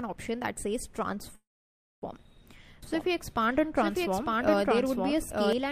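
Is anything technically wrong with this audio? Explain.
Yes, there are two faults.

From 1.35 to 2.04 s there is a call audio freeze. The sound stalls, a brief fading buzz carries on from the last moment, and then about 570 ms of near silence follows before playback resumes where it stopped. Nothing is lost, but the rest of the clip now runs about 0.67 s late. This likely comes from delayed packets draining the jitter buffer. On a spectrogram it shows as a smeared band that fades into an empty gap.

From 2.83 to 5.53 s there is a doubled audio track. A second full-band copy of the sound plays roughly one second behind the original at about the same level. It has no reverb tail or room colouring, and it cuts in and out abruptly. The likely cause is the same audio being captured again over a slower path. The waveform shows repeated shapes spaced about a second apart, and the spectrogram shows the same patterns offset in time, with hard edges.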